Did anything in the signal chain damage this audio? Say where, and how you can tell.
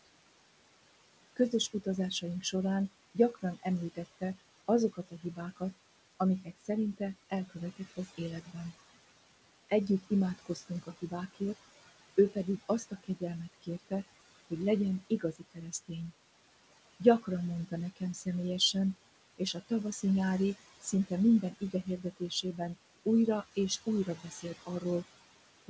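Yes. The damage happens in call processing, at the noise suppressor. Noise suppressor artifacts run through the whole clip. The room noise sits about 14 dB below the speech. The suppressor pulls it down by about 19 dB between phrases and lets it back up under them. So the background pumps in and out. The suppressor decides band by band, frame by frame, and those choices keep changing.

Speech cut by the noise suppressor happens in three stretches: 1.36 to 8.56 s, 9.69 to 15.91 s, and 17.0 s to the end. In each of the first two, about a second of sound in total is hit. Soft consonants and word endings drop by up to about 20 dB, and by about 21 dB in the last stretch. They sound swallowed. The suppressor mistook these quiet parts for noise and cut them along with the background. The band limit at 8 kHz comes from the G.722 codec, not this stage.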